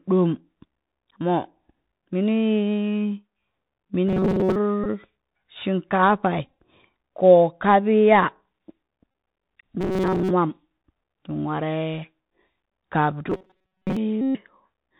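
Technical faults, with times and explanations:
throughout: Bluetooth CVSD headset codec. The speech is plainly band-limited to about 4 kHz, typical of the 64 kHz one-bit delta coding used on narrowband headset links. Each sample only signals up or down with an adapting step, so a granular hiss runs beneath the speech, sibilants come out scratchy, and loud high-frequency content outruns the step size and distorts.
4.08–4.56 s, 9.81–10.31 s, 13.30–13.97 s: robotic sound from repeated short buffers. In each span the speech turns into a rigid metallic buzz at 188 Hz that still loosely tracks the speech. The likely cause is audio arriving too late, with playback looping the last short buffer to fill the gap while most of the real audio is skipped. A buzz at 188 Hz fits a buffer of roughly 5.3 ms.
4.84–4.86 s, 6.45–6.54 s, 9.11–9.14 s, 14.21–14.39 s: Bluetooth headset packet repeated. Voice packets on the headset link were lost, and the decoder replayed the previous packet's bits in their place. 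The repeats recur every 3.75 ms, which produces a buzz near 267 Hz. The losses cover 18.8 ms, 75 ms scattered in short runs across 135 ms, 26.2 ms, and 135 ms. The last span is the longest.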